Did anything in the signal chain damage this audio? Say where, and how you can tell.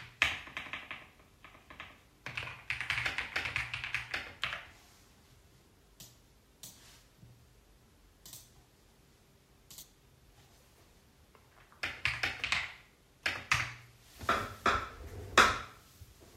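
Yes, at the codec or storage stage: compressed frames were skipped at 9.82 s and 15.39 s. The sound jumps ahead by roughly 70 ms, then roughly 20 ms, suggesting several frames and then one. Whole frames were missing or refused by the decoder as damaged, so playback jumps ahead by the length of the frames left out.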